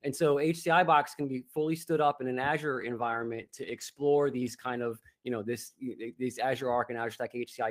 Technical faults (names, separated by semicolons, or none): call bitrate drop